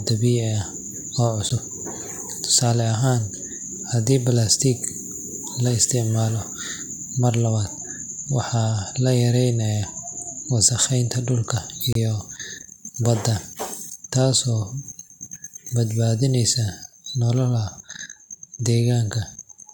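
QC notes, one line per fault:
1.49–1.52 s and 11.93–11.96 s: corrupt frame decoded. Single damaged frames played with errors at about -20 and -10 dBFS. Misplaced energy.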